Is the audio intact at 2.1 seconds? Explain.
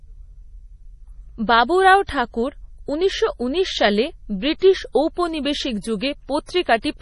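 No. From 2.07 to 2.09 s there is pre-echo. The codec spreads quantisation noise across a whole transform block, so the noise sized for a sharp attack also fills the quiet just before it. That sounds like a brief hiss of about 21 ms and a softened, smeared attack. It sits on top of MP3 compression that runs through the clip. Heavy bit starvation, which fits a low bitrate around 32 kbps, cuts everything above 11.3 kHz and switches weak frequency lines on and off, likely from an MP3 encoder, giving watery, swirly speech with metallic chirps on s sounds.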